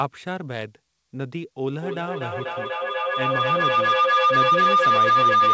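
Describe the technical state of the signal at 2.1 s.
At 2.1 s the signal is in a feedback howl. It starts at 1.69 s and runs to the end of the clip. A microphone is picking up a loudspeaker on the same call, and each trip around that loop adds level. The repeats grow instead of dying away. They narrow to a tone near 1 kHz, with the loop coming round roughly every 200 ms. At its peak it stands about 12 dB above the speech, inside a band that stops at 8 kHz.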